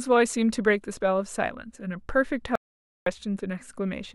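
At 2.55 s the speech drops out completely and stays gone until 3.06 s, so about half a second of audio just vanishes. It's an audio dropout to silence: the gap is silent, with no room tone underneath at all. Most likely the input was briefly lost, say a loose connection or a momentary mute, while the recorder kept writing silence, so whatever was said there is simply missing.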